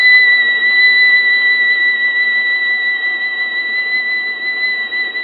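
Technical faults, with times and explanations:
Throughout, AAC compression: the music sounds dull and smeared, with a warbly, fizzy texture on sustained tones. That's likely an AAC-LC encode at a very low bitrate, around 16 kbps, where the encoder drops the top end and leaves holes in the spectrum.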